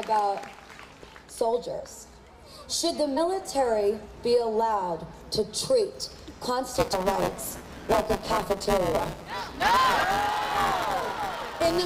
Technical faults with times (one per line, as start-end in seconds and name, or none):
1.02 damaged data in a compressed stream
3.16 damaged data in a compressed stream
6.75-11.85 buffer tearing
6.92 damaged data in a compressed stream
10.54 damaged data in a compressed stream